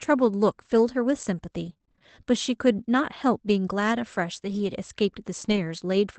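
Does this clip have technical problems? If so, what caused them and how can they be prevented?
Yes. Between 1.65 and 5.58 s there are scattered short gaps, around seven dropouts of about 20 ms at most. Lost or late packets left tiny holes that the receiver filled by extending the preceding sound, heard as brief ticks and smears. On a spectrogram these show as thin vertical seams where harmonics briefly flatten or repeat. Forward error correction, a deeper jitter buffer and a steadier network connection would prevent them.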